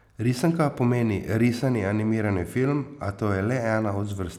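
Speech, with a Bluetooth SBC bit pool drop from 1.79 to 3.21 s. The treble dulls and a gritty noise rises, then clears. This fits the encoder halving its bit pool, roughly 28 down to 14, near 108 kbps. Upper sub-bands get starved, and the rest are coarsely quantised.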